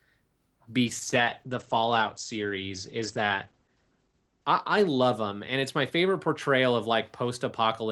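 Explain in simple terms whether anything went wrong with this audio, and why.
Something did go wrong: a call bitrate drop starting at 0.86 s and lasting to about 7.77 s. The call's connection estimate fell, so the encoder was told to squeeze the speech into far less data. It then describes the sound more crudely and throws away the upper frequencies above roughly 8 kHz, so the speech turns muffled and rough. The worst stretch lasts nearly three seconds before quality partly recovers.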